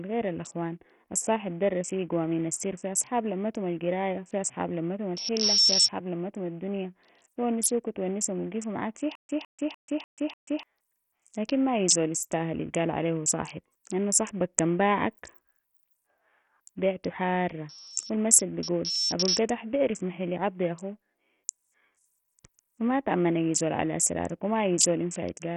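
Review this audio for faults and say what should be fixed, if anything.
The speech is gritty throughout, with treble that flickers in and out and a coarse, aliased edge on the sound. This is likely Bluetooth SBC compression running at a very small bit pool, consistent with roughly 48 kbps. To prevent it, send the audio over a wired path or raise the SBC bit pool or codec quality.

A loudspeaker feedback squeal at 5.4 kHz runs from 4.95 to 5.92 s, between "لمتم القراية في أصحاب" and "لمتم الدنيا بي ونسوك". It swells over about half a second to roughly 10 dB above the speech. It returns from 17.61 to 19.52 s, just before "بيعرف محل يعضي أخو", building over about 1.5 s to roughly 5 dB above the speech. In both cases the microphone is picking up its own loudspeaker, and loop gain at that frequency exceeds one. To prevent it, reduce monitor gain, move the microphone away from the loudspeaker, or notch 5.4 kHz in the monitor feed.

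A stutter with silent gaps starts at 9.15 s, right after "معاك في", and lasts until 10.63 s. A 158 ms burst repeats five times, each followed by 138 ms of digital silence, so it recurs every 296 ms. The player likely re-issues its last fragment during a stall, and the intervening audio is lost. To prevent it, enlarge the playback buffer and fix the stalling source or network.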